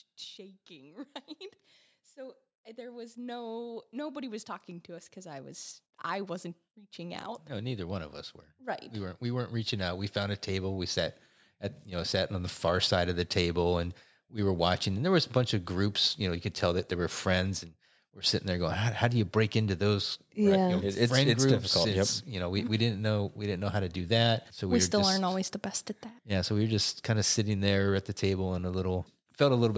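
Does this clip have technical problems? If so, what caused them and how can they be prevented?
Yes. Automatic gain rising from 0.35 to 12.92 s: the level control judged the input too quiet and lifted speech and background together by about 19 dB. Set microphone input level correctly beforehand, or disable automatic gain control.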